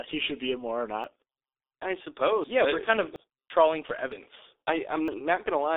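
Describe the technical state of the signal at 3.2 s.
At 3.16 s there is an abrupt jump forward, with about a tenth of a second missing and no gap of silence. The likely cause is a dropped buffer (overrun), where unread samples were overwritten and the two sides were joined directly. A dropout would leave a silent hole; this seam closes instantly.

That moment also carries the G.723.1 codec damage present throughout. The speech is muffled, with nothing above 3.6 kHz, hoarse, and smeared at the consonants, which fits a coder running near 6 kbit/s on 30 ms frames. This is a steady dulling, unlike the single discrete jump.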